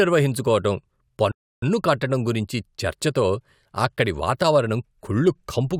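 The player likely ran short of data, causing a playback stall: the speech cuts to silence mid-flow from 1.31 to 1.63 s, then resumes.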